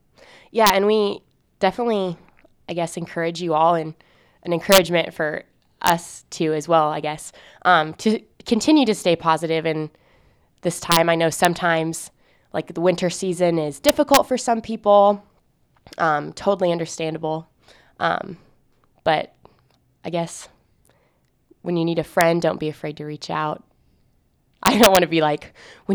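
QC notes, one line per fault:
0.67–0.70, 4.72–4.78, 5.87–5.90, 10.92–10.97, 11.45, 13.89–14.17, 22.21, 24.66–24.97 s: integer overflow. Loud peaks exceed full scale by up to about 3 dB and wrap to the opposite sign, giving sharp, violent cracks instead of clipping.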